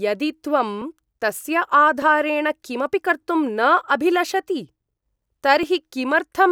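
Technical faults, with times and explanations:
0.82–5.63 s, clock drift buffer slips: two devices are likely running on separate clocks that disagree by several hundred parts per million, so the buffer between them drops or repeats a block of roughly 50 samples. The speech carries about five regular clicks, one every 1.2 s.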